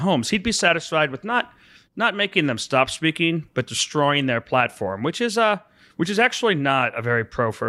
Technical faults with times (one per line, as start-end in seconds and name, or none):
none